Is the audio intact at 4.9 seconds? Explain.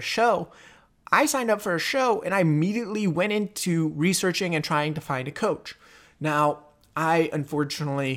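Yes, the speech at 4.9 seconds plays through intact, with no audible fault at that moment.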